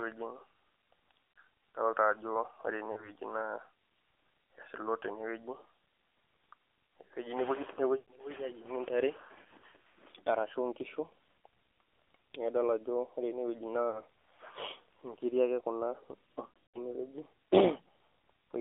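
Throughout, the speech carries the AMR narrowband mobile codec. Everything above about 3.5 kHz and below 300 Hz is gone, so a spectrogram shows a hard ceiling. The buzzy, synthetic texture fits a low-rate mode near 7.4 kbps.

Lost AMR speech frames occur at 1.35–1.43 s, 2.92–3.11 s, 8.00–8.12 s, 9.58–9.63 s, 13.90–14.02 s and 16.46–16.81 s. The decoder stretches the last good sound while the gain falls, and the waveform shows the envelope sagging. The last event is the longest, about 220 ms of loss spread over 280 ms, and there the sound smears and briefly fades out.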